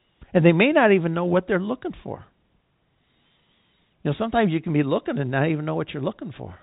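No technical faults are present.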